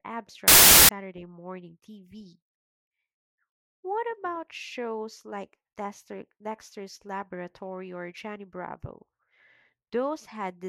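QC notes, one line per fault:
0.48–0.89 s, samples built from the wrong bytes: the low bits got read as the loud part of each value, so the speech turns into loud, harsh broadband noise.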